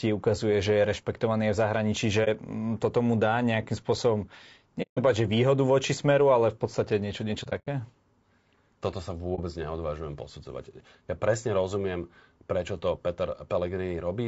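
The speech sounds rough and grainy throughout, with noise between harmonics. This is plainly audible low-delay AAC compression, likely AAC-ELD at a low bitrate around 32 kbps.

AAC frame loss with muting leaves brief dips or soft-edged silent holes where the decoder zeroed missing frames. These come at 2.24 s after "je rešpektovaný v zahraničí" and before "um toto mu dá", lasting 0.05 s. Another, 0.18 s long, comes at 4.82 s, ending before "povedať že výhodu voči". At 7.43 s, after "v podstate niečo niečo", gaps scatter over 0.24 s, the longest about a tenth of a second. At 9.35 s, a short gap lasts 0.05 s.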